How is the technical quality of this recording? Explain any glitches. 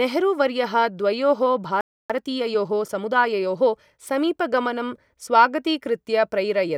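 The recording has two linked playback faults.

From 1.81 to 2.10 s there is a playback stall. The speech cuts off mid-flow and the output goes silent for 0.29 s. The likely cause is that the player ran out of buffered data or its thread was blocked.

From 2.10 to 4.02 s comes time-compressed catch-up. To clear the backlog from the stall, the player cuts out small slices and cross-fades the joins. The speech runs 1.15 times fast at normal pitch, hurried.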